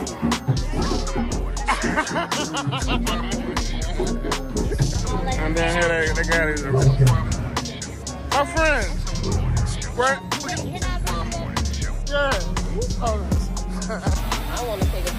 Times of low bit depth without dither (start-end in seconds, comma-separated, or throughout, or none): none